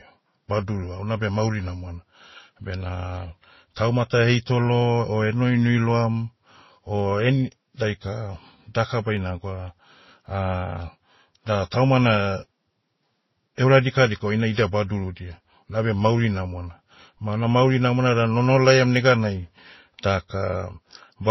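From the first moment to the end, the speech has nothing above 5.8 kHz and carries two distinct layers of coding damage, the artefacts of two codecs heard together. This points to transcoding between lossy codecs, likely a low-bitrate MP3 pass of around 24 kbit/s followed by a Vorbis re-encode near 27 kbit/s. The second encoder spent its limited bits reproducing the first one's artefacts, added its own, and kept the lower bandwidth limit.

From 0.46 s to 21.14 s, a short click recurs every 1.09 s, about twenty times in all, audible while speech is present. These are likely clock drift buffer slips. Two devices run on clocks that disagree by roughly 150 ppm, so the buffer between them slowly drifts until a handful of samples is dropped or repeated. Each correction breaks the waveform's continuity and is heard as a tick at a steady interval.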